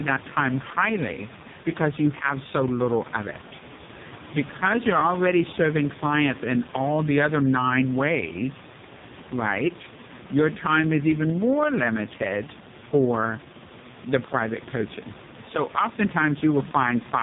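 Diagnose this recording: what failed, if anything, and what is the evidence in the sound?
The failure is at the codec stage: AMR narrowband mobile coding throughout the speech, heavily damaged. Nothing passes above 3.8 kHz, and the voice is buzzy and synthetic, which fits the lowest 4.75 kbit/s mode. Unlike a plain low-pass filter, the tone itself is rebuilt, and the background room noise swirls.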